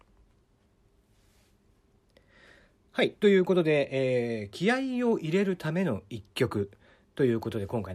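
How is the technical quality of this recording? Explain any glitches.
No glitches or technical faults can be heard here.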